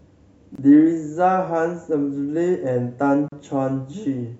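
Gaps at joins of encoded pieces occur at 0.55 s, lasting about 28 ms, and at 3.28 s, about 38 ms. Separately encoded segments were spliced untrimmed, keeping encoder delay and last-frame padding, so the speech drops into brief silence with smeared edges, then resumes where it stopped.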